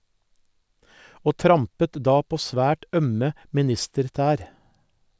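There are no technical faults to describe at any point in this speech.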